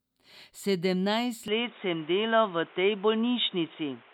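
From 1.48 s the speech turns boxy with nothing above 3.8 kHz and new background noise, likely an input switched to a poorer device, with no gap or level jump.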